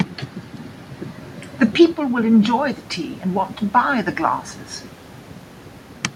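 From 1.95 s to 4.49 s the voice and the room noise behind it swell together, slowly and by about 4 dB. This is automatic gain rising. After the talker moved away around 1.5 s and the input dropped about 10 dB, the gain control gradually pushed its level up.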